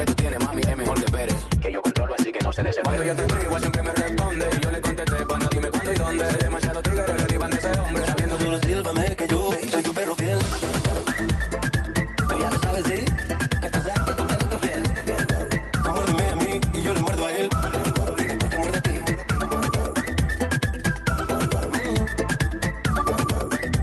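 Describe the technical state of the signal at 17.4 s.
At 17.4 s the signal is intact, with no dropout, glitch or other fault at that moment as it passes through the WebRTC call path.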